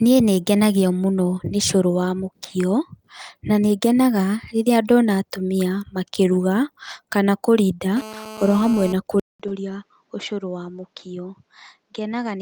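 From 7.97 to 8.93 s a hard, raspy buzz sits under the speech, about 16 dB below it, pitched at 217 Hz and thick with harmonics. It holds steady for the whole stretch and has no connection to what is being said. This is GSM phone buzz: a 2G handset on a call nearby transmits in bursts 217 times a second, and the audio circuitry rectifies those radio pulses into an audible tone.

At 9.20 s the audio drops out for about 200 ms, then returns noticeably quieter and duller, with nothing above 7.6 kHz and a faint new background noise well beneath the speech. It stays that way to the end of the clip. The sudden change in bandwidth, level and noise floor, with a gap at the join, points to an input switched to a poorer device, likely the system handing over to another microphone or a headset's narrower call profile mid-recording.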